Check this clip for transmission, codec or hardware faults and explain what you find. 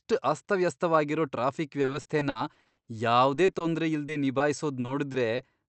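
The clip has three kinds of transmission fault, all from network delivery.

Repeated packet loss (robotic sound) begins right after "ಅಸ್ತವ್ಯಸ್ತವಾಗಿರೋ ಟ್ರಾಫಿಕ್" and runs from 1.81 to 2.89 s. It returns at 3.34 to 3.62 s and again at 4.80 to 5.40 s. The speech turns choppy, with pieces audibly missing. In the first stretch, twelve gaps of up to 60 ms came close together. The receiver bridged each one by extending the preceding sound, so that stretch is over a third synthetic. The later two stretches are lighter, with gaps up to 20 ms and 40 ms.

Jitter buffer slow-down follows at 2.92 to 3.27 s. The speech there drags to about 88% speed with its pitch unchanged, so the sounds seem drawn out. The receiver was short of buffered audio or had just raised its target delay. It repeated single pitch periods to add roughly 50 ms of reserve.

Short concealed packet loss occurs at 4.06 to 4.10, 4.12 to 4.16 and 4.38 to 4.42 s. 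Each is a brief smear or wobble. About 20 ms arrived too late to decode, and the receiver patched each hole by continuing the last sound before blending back into the real signal.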